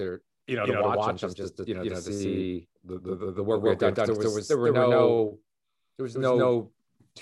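A doubled audio track runs through the whole speech clip. A second, equally loud copy trails by roughly 150 ms, likely from a slower capture path mixing in.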